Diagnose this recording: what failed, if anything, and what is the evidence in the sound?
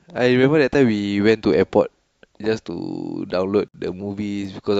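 The failure is at the codec stage, where separately encoded pieces were stuck back together: a gap at a join of encoded pieces. Around 3.68 s the speech drops out for about 59 ms, to 3.74 s, with edges smeared by the codec, then picks up exactly where it left off. That's the encoder's start-up delay and last-frame padding left untrimmed at the splice, so a slug of silence sits in the middle of continuous audio.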